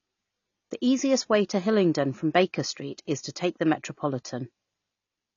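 Low-bitrate AAC compression, likely around 24 kbps, runs throughout: nothing survives above 7 kHz, leaving the speech dull, smeared and fizzy on sibilants.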